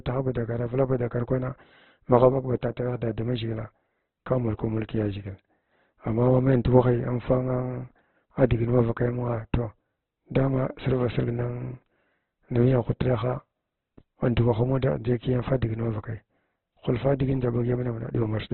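This is a speech clip with heavy Opus compression throughout. Nothing sounds above 4.2 kHz, so the sound is narrow and dull. Tones turn grainy, rough and noisy. The likely cause is Opus music mode starved of bits, which fits a rate near 12 kbps.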